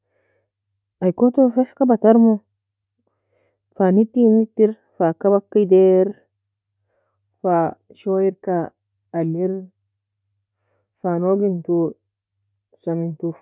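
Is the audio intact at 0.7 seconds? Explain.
Yes, at 0.7 seconds the speech plays through intact, with no audible fault at that moment.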